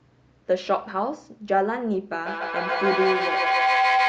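Two devices sharing one room on the same call have closed an acoustic loop, with each pass from microphone to loudspeaker and back adding level, so the result is a feedback howl. From 2.12 s to the end, the repeats swell instead of dying away and narrow to a tone around 700 Hz, pulsing roughly every 150 ms at the loop's delay. At its peak the howl sits about 2 dB above the speech.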